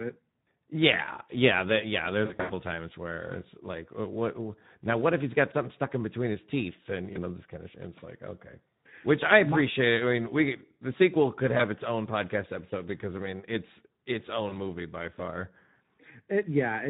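Speech coded throughout with the Speex codec at around 11 kbps, and the damage is plainly audible: the voice sounds hoarse and grainy. On a spectrogram, the harmonics look smeared and noisy, and the region above 8 kHz, where present, shows only a diffuse, shaped noise fill rather than clear structure. There is also VoIP packet loss concealed by the speech codec. The worst stretch runs from 2.25 to 2.52 s, between "yeah yeah yeah" and "times where it's like". The decoder fills the gaps by extending its last pitch and filter, so the voice is stretched and fades. The sound points to about 160 ms of audio lost in bursts of up to 80 ms across a quarter second, seen on the waveform as a decaying envelope and on the spectrogram as frozen, repeated harmonics. Shorter single dropouts at 7.13–7.18 s (after "between his teeth and", before "know this kind of"), 11.57–11.63 s (after "we the sequel could", before "its own podcast episode") and 14.49–14.54 s each leave a brief dip of roughly 20 ms of lost audio.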